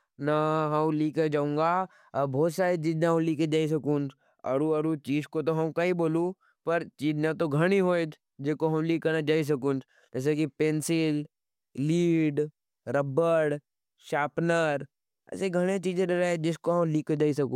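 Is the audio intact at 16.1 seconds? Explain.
Yes, at 16.1 seconds the speech plays through cleanly, with no dropout, click, distortion or other break in the signal.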